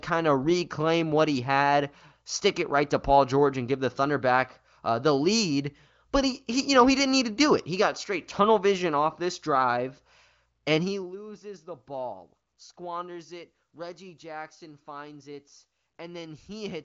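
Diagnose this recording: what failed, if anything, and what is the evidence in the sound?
Nothing failed; no faults found.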